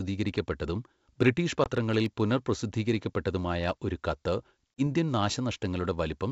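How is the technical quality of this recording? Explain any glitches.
There are two glitches in this speech, both packet loss on an ADPCM call. The first runs from about 1.64 to 1.69 s, with 20 ms of sound missing, roughly one packet's worth. The second runs from 4.74 to 4.82 s, with 40 ms gone, about two packets. Each is a sharp-edged hole of silence. Because the decoder's predictor and step size have drifted from the sender's, the speech comes back slightly distorted before settling.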